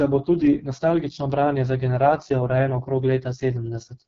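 Speech carried throughout by the AMR wideband (HD Voice) codec at a very low rate, which fits its lowest 6.6 kbit/s mode, renders the sound heavily coded, rough and raspy, with synthetic-sounding noise filling the top band and nothing above 7.5 kHz.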